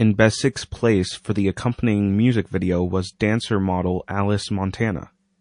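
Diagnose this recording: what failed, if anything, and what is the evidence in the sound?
Throughout the speech the treble is dulled and watery, with swirly, chirping texture on s sounds and softened consonant edges. The stage is the codec: likely MP3 compression, where the encoder ran short of bits, capped the high band and let weak frequency lines flicker between frames, which fits a bitrate around 40 kbps.

From 0.53 to 0.56 s, just before "place for the accompanying", a brief hiss about 16 dB above the surrounding quiet leads into the attack, which lands smeared. This is pre-echo, also from the codec. The encoder kept long blocks at the attack, which fits a window near 52 ms, so quantisation noise sized for the loud onset spread back about 29 ms into the silence ahead of it.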